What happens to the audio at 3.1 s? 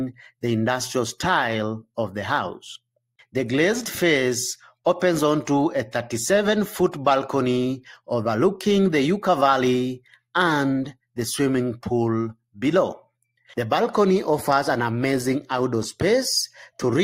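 Nothing goes wrong at 3.1 s: the audio runs through that moment intact, with no dropout, click or other fault.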